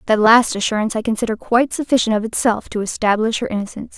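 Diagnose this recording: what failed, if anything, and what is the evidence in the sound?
Nothing failed: at no point in the speech recording is there audible evidence of a fault at any stage of the chain.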